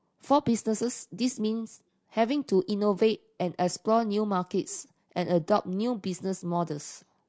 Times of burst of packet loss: none

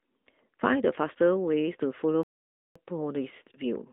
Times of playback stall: 2.23-2.75

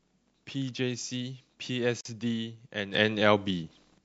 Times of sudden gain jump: 2.94-3.98

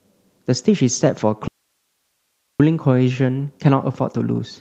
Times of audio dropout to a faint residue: 1.48-2.60

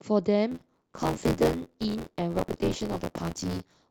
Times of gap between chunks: none

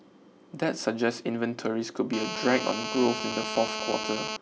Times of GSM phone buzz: 2.13-4.37

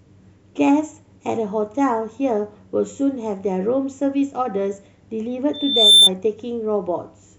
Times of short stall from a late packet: none

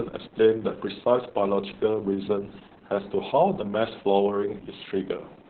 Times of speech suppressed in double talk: none

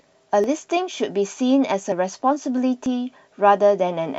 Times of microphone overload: none

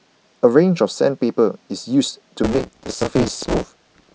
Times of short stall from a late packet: none

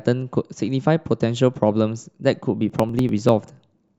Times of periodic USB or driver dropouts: 2.70-3.88

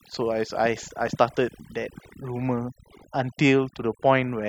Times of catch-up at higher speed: none

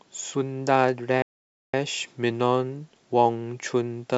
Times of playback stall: 1.22-1.74

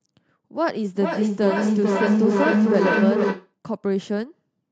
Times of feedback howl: 0.66-3.54

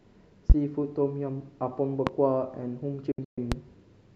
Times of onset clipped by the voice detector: none

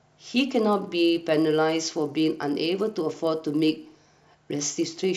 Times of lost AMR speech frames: none

